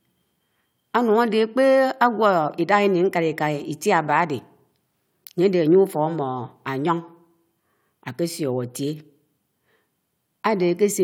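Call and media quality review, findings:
No technical faults were found in the signal, and the speech path shows no dropouts, discontinuities or level problems anywhere in the recording.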